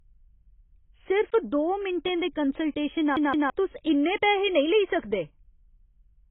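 AAC compression, heard from start to finish: the speech is dull and band-limited, with nothing above about 3.8 kHz, and sibilants and held vowels take on a smeared, watery warble. That points to a perceptual codec, likely AAC-LC at a very low bitrate, throwing away most of the high-frequency detail and coarsely quantising what remains, so the spectrum thins out and its texture shifts from frame to frame.

A CD stuck on one turn follows, from 3.16 s to 3.50 s. The same 0.17 s fragment of speech plays twice in a row, with a short dropout at each jump, giving the quick, mechanical stutter of a skipping disc. This happens when the laser is knocked back one track at the same damaged point on each rotation and replays that short stretch until it gets past the fault.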